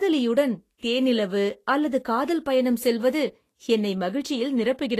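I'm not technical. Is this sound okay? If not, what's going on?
No. Across the whole speech clip there is a grainy, hissy texture, and the sound stops entirely above 14.2 kHz, so it lacks its finest airiness. This is likely Vorbis compression, squeezing the audio so hard that delicate high detail turns into noise.

From 0.78 to 0.83 s, a short hiss smears in just ahead of a sharp onset, right before "தேனிலவு அல்லது காதல் பயணம்". That is pre-echo: the codec spreads its noise over a short chunk, leaking it about 44 ms early.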